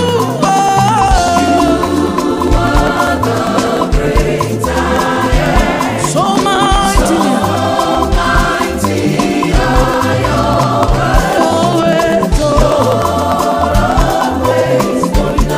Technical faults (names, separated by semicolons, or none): periodic USB or driver dropouts